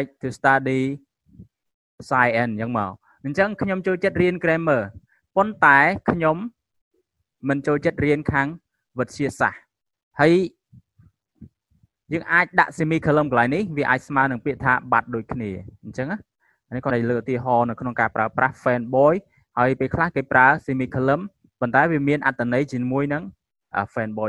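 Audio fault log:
16.87 to 16.91 s, damaged data in a compressed stream: a quick blip, only about 40 ms long, cutting into the sound. Some bytes in the encoded stream were corrupted at that spot, so the decoder misread the frames there, lost its place, and had to hunt for the next valid frame header before it could carry on. What comes out in that gap is not the real audio, hence the brief artefact.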